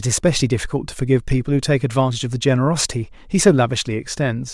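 No technical faults can be heard anywhere in the speech.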